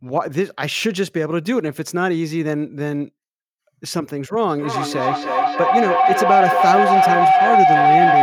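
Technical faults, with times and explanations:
4.59 s to the end, feedback howl: a loop between a mic and a nearby speaker on the same call gains level each pass, so it narrows to a tone near 700 Hz, repeats about every 0.3 s, and peaks about 7 dB above the speech.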